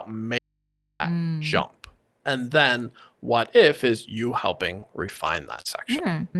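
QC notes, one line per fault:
0.39–1.00 s, audio dropout to a faint residue: the speech cuts abruptly for 0.61 s, leaving only hum about 55 dB down, likely from an open, live input.
4.79–6.12 s, scattered short gaps: about four brief losses, the longest around 30 ms, are patched by extending the preceding sound, giving small hiccups and smears.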